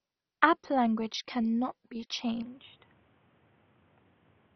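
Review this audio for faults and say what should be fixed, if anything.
Throughout the speech the sound is dull and gurgling, with nothing above 6.1 kHz. That points to MP2 compression at a very low bitrate, likely near 32 kbps, where upper sub-bands are switched off and the remaining ones are coarsely quantised. A simple low-pass filter would not produce the granular, flickering distortion. Encode at a higher bitrate or use a modern codec.

From 2.42 s to the end, the top narrows further to 3.8 kHz. The level drops by a few decibels and a new noise floor appears about 30 dB down, with no gap at the change. These are signs that the input likely switched to a poorer device. Codec damage would not bring a new noise bed or a level step at a single moment. Lock the recording input so the system cannot change devices mid-take.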